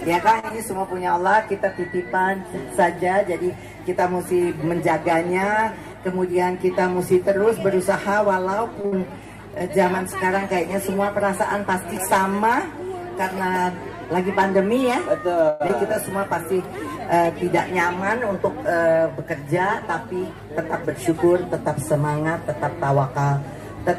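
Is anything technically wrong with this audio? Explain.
Yes, the audio has several network-related playback faults.

Short stalls from a late packet occur at 0.39 to 0.45 s and 8.81 to 8.86 s. The sound hangs briefly, for about 36 ms and then 25 ms, with a faint buzz or dip. A packet arrived late, the jitter buffer emptied, and the receiver extended the last sound before resuming at the same point, so nothing is lost.

A short concealed packet loss at 0.49 to 0.52 s gives a quick smear or wobble. About 20 ms of audio never reached the decoder, and the receiver patched only a few milliseconds by continuing the preceding sound, then blended back into the real signal.

Jitter buffer speed-ups at 5.93 to 6.32 s and 15.27 to 15.49 s make the sound briefly hurried at unchanged pitch, at 108% and then 113% speed. Too much audio had built up in the buffer, so the receiver trimmed small pitch-period slices, roughly 40 ms in total each time, to reduce delay.

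A burst of packet loss at 8.86 to 9.08 s brings a held buzz or fading hiss, then the audio resumes further on. About 60 ms went missing across consecutive packets, and the receiver synthesised a similar length from the last sound, attenuating it.

A call audio freeze at 15.49 to 15.62 s holds the sound for about 106 ms as a fading continuation, never reaching silence, before carrying on from where it stopped. This likely comes from packets held up in transit draining the jitter buffer.

A skip ahead at 15.68 to 15.71 s jumps forward almost seamlessly, dropping around 70 ms of audio. Later packets were already queued, so a stretch was discarded and both sides of the cut were joined nearly directly.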